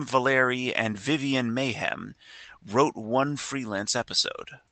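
Nothing's technically wrong with this bit of speech; it just carries the ordinary sound of a call codec, with the top end stopping around 8 kHz.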